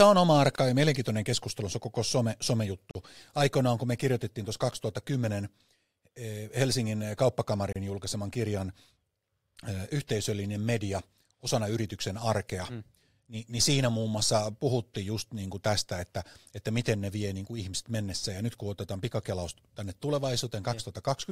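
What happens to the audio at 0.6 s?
A gap at a join of encoded pieces runs from 0.555 to 0.582 s, a gap of about 27 ms cut into the continuous speech. Two separately encoded pieces were spliced without trimming the encoder's start delay and final-frame padding. The hole has smeared edges, and the speech resumes exactly where it stopped.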